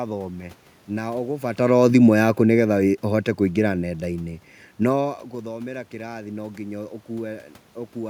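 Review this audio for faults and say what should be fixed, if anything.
Automatic gain falling, 1.6 to 3.98 s: the gain control, finding the input too loud or its background noise too strong, eases level down by about 5 dB. The room noise sinks along with the speech, unlike the talker moving near 1.5 s. Lowering the input level or fixing the gain instead of leaving it automatic would prevent it.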